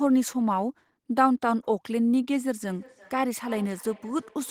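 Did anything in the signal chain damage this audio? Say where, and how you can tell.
Yes, in call processing: feedback echo between two devices, since neither echo canceller removes the other's playback. From 2.68 s, words return roughly every 300 ms, about 23 dB down.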